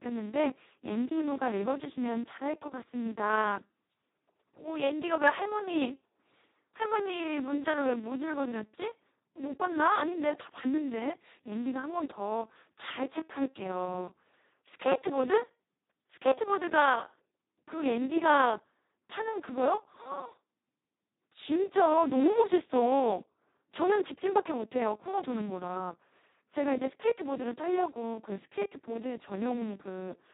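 From start to finish the speech carries heavy Speex codec damage, and the robotic, hoarse quality fits a rate near 2 kbps, where the CELP excitation is starved of bits and behaves almost like a vocoder. Nothing is present above 3.8 kHz.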